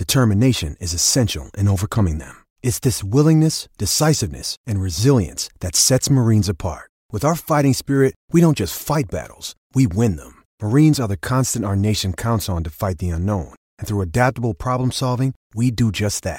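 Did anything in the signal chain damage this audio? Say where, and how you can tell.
No, nothing along the way seems to have done this speech any harm; I can't hear anything that points to damage at any stage of the chain.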